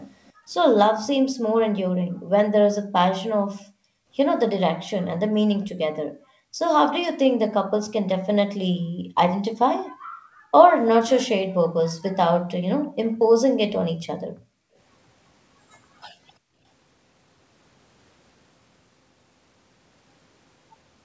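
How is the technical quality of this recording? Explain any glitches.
The call itself comes through fine, with the usual 8 kHz ceiling of a G.722 call, but two echo-canceller problems show up.

Echo leak: at 0.25 to 0.32 s there's a very faint delayed copy, about 340 ms late, most likely residual loudspeaker sound the far side's canceller missed.

Background gated by the echo canceller: at 0.33 to 4.1 s, 6.07 to 6.59 s and 8.67 to 16.63 s, the canceller clamps the mic while the loudspeaker plays. The room sound drops by up to about 40 dB, then comes back.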